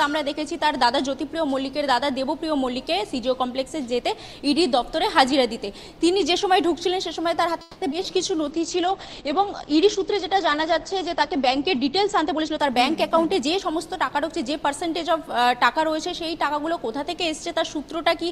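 Right around 7.61 s there's a call audio freeze lasting until 7.83 s, likely caused by packets arriving late and the jitter buffer running dry. The receiver keeps the last sound going for about 0.2 s instead of dropping to silence, then picks up where it left off, so nothing's actually lost, just delayed.

Straight after that come two bits of short concealed packet loss, at 7.91 to 7.94 s and 8.02 to 8.06 s. Each time a few hundredths of a second never made it to the decoder in time, and the receiver papered over the hole by extending what came before and blending back in. You hear a quick smear or wobble.

From 8.07 to 8.67 s there's a jitter buffer slow-down. The receiver is rebuilding its reserve by repeating tiny pitch-period chunks over and over, adding about 45 ms. The audio drags at roughly 93% speed while the pitch stays put.

Overlapping that, a call bitrate drop kicks in at 8.52 s. 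The encoder gets squeezed from 48 kbps down to 11 kbps, sits at the bottom for about 2.5 s, and the audio bandwidth shrinks from 20 kHz to 8 kHz. It goes coarse and muffled, losing its top end, and only clears by 15.68 s.

Inside that stretch, from 12.19 to 13.92 s, there's a jitter buffer speed-up. The buffer has more queued than it wants, so the receiver snips out short pitch-period pieces repeatedly, around a fifth of a second in total. Everything rushes along at about 112% speed with the pitch unchanged, which sounds noticeably hurried.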